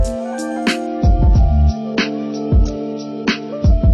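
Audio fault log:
0.87–3.94 s, adaptive stream at a lower bitrate: the quality falls abruptly with no gap, and nothing remains above 6.6 kHz to the end, with thicker coding artefacts, which fits the stream switching from around 96 kbit/s AAC to roughly 24 kbit/s when the connection slowed.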